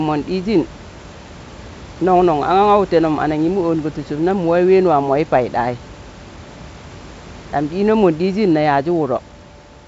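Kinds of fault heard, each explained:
No faults heard.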